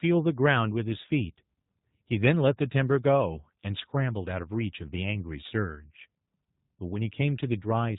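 From start to finish, the speech carries the sound of the G.729 codec, specifically its G.729A variant. The top end stops around 4 kHz, and the voice is rebuilt from a vocal tract model and a handful of pulses, giving a rough, slightly synthetic edge consistent with roughly 8 kbit/s.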